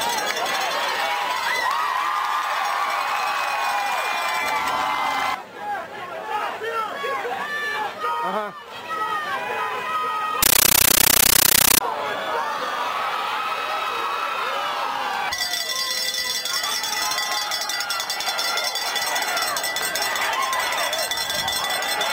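At 10.43 s the audio turns to harsh, very loud chattering static until 11.81 s. That's a compressed stream played as audio: an AC-3 bitstream taken as plain samples, each frame a 13.3 ms noise burst repeating 31.25 times a second.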